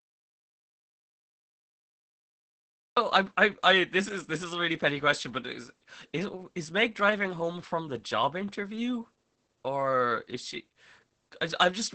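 From the start until 2.97 s the clip sits in an audio dropout to silence. The gap is silent with no room tone, unlike a quiet pause, and likely comes from lost input before "I I I this" cuts in abruptly. Throughout, Opus voice compression leaves nothing above about 8.7 kHz and makes the speech hoarse and slightly robotic. That coarse coding of the excitation goes beyond simple band-limiting and fits a SILK bitrate near 10 kbps.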